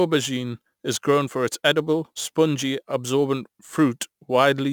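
Throughout, the audio shows crude rate conversion. The sample rate was raised without any filtering, simply repeating the nearest existing sample. The regular pattern of duplicates fits a conversion from 44.1 kHz to 48 kHz. The resulting error sits roughly 25 dB below the speech and forms shifted, inharmonic copies of it, heard as a gritty, inharmonic fizz that rides on louder and brighter syllables.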